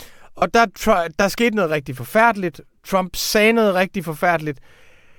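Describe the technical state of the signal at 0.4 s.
At 0.4 s the Bluetooth link has lost LE Audio frames, from 0.38 to 0.42 s, 37.5 ms, which fits five 7.5 ms frames. The LC3 decoder conceals the gap by repeating the last spectrum with random signs, so the speech smears briefly into noise.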